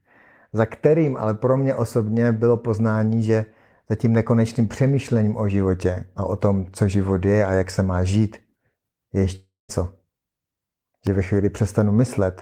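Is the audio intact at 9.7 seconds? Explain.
No. A long network dropout runs from 9.35 to 9.71 s, likely because audio stopped arriving. The receiver stretches the last sound into a fading buzz, then leaves about 0.18 s of silence, and speech resumes with 0.34 s missing.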